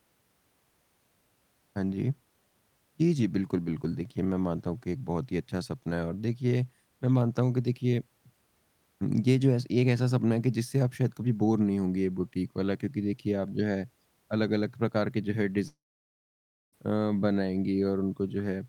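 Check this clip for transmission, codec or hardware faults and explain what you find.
There's one fault in this speech clip. From 15.67 to 16.75 s a long network dropout likely cut the stream. The sound smears into a fading buzz, then about a second of near-silence follows before speech resumes with a chunk missing.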